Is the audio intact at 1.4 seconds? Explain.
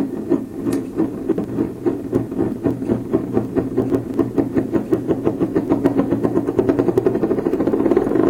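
No, not quite. Between 1.32 and 1.44 s there's a chunks out of order fault. Two 60 ms chunks have swapped places, with one arriving a chunk late and playing after the piece that should have followed it. Nothing's missing, but the sequence is scrambled and you get three hard joins in that span. It comes across as a brief jumbled moment right around 1.4 s.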